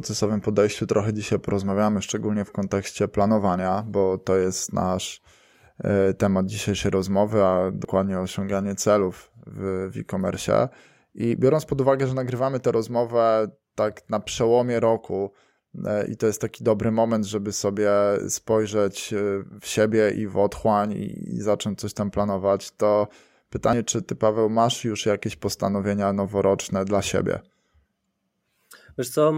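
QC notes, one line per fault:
7.85 s, dropped buffer (overrun): a sudden jump between "temat dzisiejszej rozmowy a" and "osiąganie celów w w", and no gap where audio is missing. Roughly 50 ms has vanished and the two sides butt together, likely because samples were overwritten before being collected.
23.73 s, dropped buffer (overrun): a skip forward just before "czy ty", again with no silence at the join. About 50 ms of sound was lost and the edges were spliced directly, likely from the same unread-buffer overwrite.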